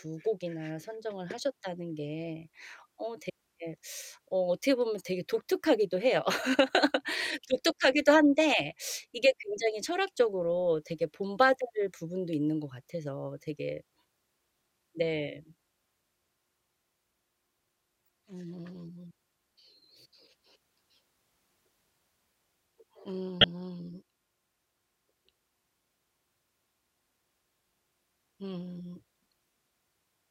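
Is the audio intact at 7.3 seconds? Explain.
Yes, the audio is intact at 7.3 seconds, with no audible fault at that moment.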